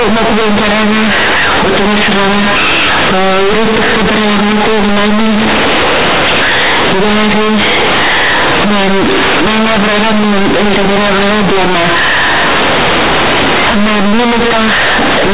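Throughout the clip, the speech is companded audio read as linear. A-law telephone bytes play as raw 8-bit samples with no expansion, so each sign change swings across half the range. Unlike plain clipping, the pauses roar with noise and quiet sounds blast as loudly as loud ones.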